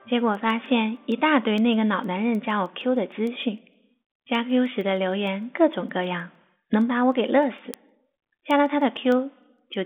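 A digital link in this speech clip is being read by a receiver on its own clock, mismatched by roughly 150 ppm, so word clock ticks result. A sample is dropped or repeated each time the clocks slip, giving sharp ticks about every 0.15 s, around seventy in all, from 0.20 s to 9.74 s. The telephone-band sound, cut off above 3.8 kHz and consistent with 40 kbit/s G.726 ADPCM, shows little codec roughness.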